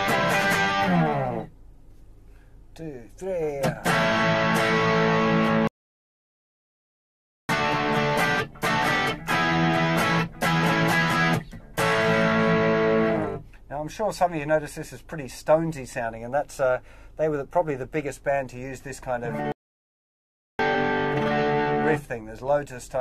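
At 3.60 s, compressed frames skipped: the decoder lost about two frames, which fits a frame length near 23 ms. The audio leaps forward roughly 50 ms. From 5.67 to 7.49 s comes a playback stall, likely the player running out of data. The sound cuts off mid-flow for 1.8 s, then carries on. A second stall from 19.52 to 20.59 s, again likely starved playback, silences the output for 1.1 s. At 20.74 s roughly one more frame is skipped, a brief jump of around 20 ms.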